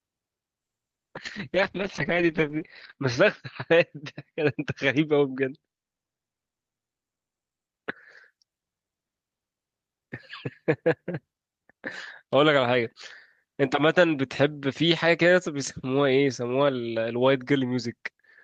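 Speech, with a call bitrate drop from 0.61 s to 7.75 s. The codec's bandwidth narrows from 20 kHz to 8 kHz, muffling the top end, and the coding turns coarse and watery, worst for about 2.35 s. The roughness points to the encoder falling from around 32 kbps to 8 kbps. Unlike packet loss, the sound never gaps or stutters; it stays continuous but degraded until quality climbs back.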